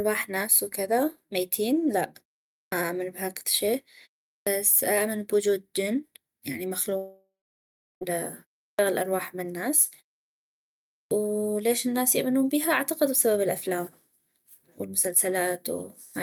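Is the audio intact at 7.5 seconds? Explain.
No. At 7.5 seconds the audio sits inside a long network dropout running from 6.97 to 8.03 s. The gap points to packets that likely never arrived in time. About 1.04 s of speech is missing. The receiver fills the hole by stretching the last sound into a fading buzz, then leaves about 0.7 s of near silence. Speech resumes at 8.03 s, but the lost part never returns.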